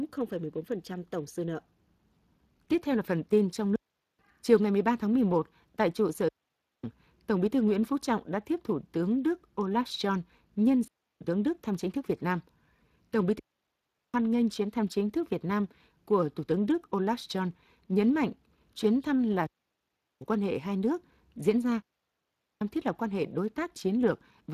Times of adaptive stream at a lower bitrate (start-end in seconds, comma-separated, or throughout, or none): none